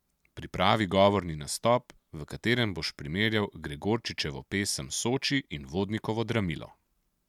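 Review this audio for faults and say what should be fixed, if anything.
No faults heard; nothing needs fixing.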